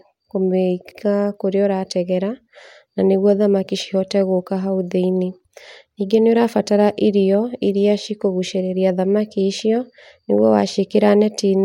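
At 0.91 s, just before "kũrĩa ũrategera", there are repeated frames. A 96 ms stretch of speech plays twice, which fits a run of three compressed frames sent again. It is heard as a brief stutter, and the clip runs 96 ms longer.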